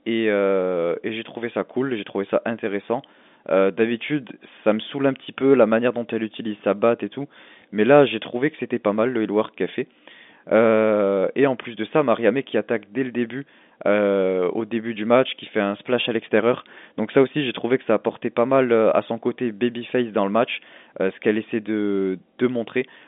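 Nothing is technically wrong with this speech clip, which comes through with the narrow band of a G.711 telephone line.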